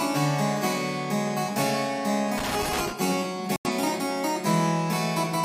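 From 2.38 to 2.93 s there is a burst of loose connector crackle. A worn or dirty contact is making and breaking as it moves. Each break chops the signal for an instant. The result is an uneven spray of scratching and small ticks lasting about half a second. It has no steady rhythm. It stops as abruptly as it starts, once the contact settles.

At 3.56 s a digital broadcast dropout begins. The receiver stopped getting usable frames and muted its output. The sound fades out in about 3 ms, so it reads as a sharp cut rather than a click. The hole lasts until 3.71 s. About 85 ms of programme is gone, which fits two lost frames. When the sound returns it has moved on, and nothing from the gap is recovered.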